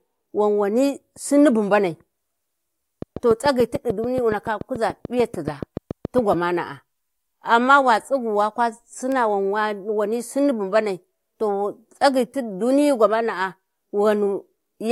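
Speech recording with a train of clicks: likely interference from nearby equipment or a faulty connection or power supply injects regular pulses, about 7 per second, from 3.02 to 6.34 s, heard as around twenty ticks standing roughly 10 dB above the speech.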